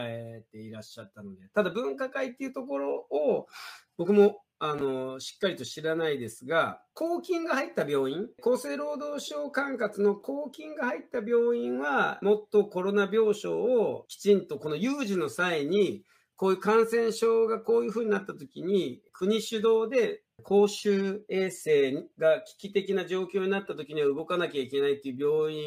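No dropouts, clicks, distortion, level jumps or timing errors turn up anywhere in the recording.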